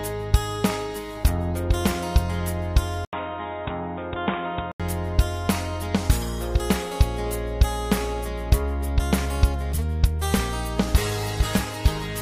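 At 3.05 s, after an 80 ms gap, the audio turns boxy, somewhat quieter and cut off above 3.8 kHz until 4.8 s, likely an input switched to a poorer device.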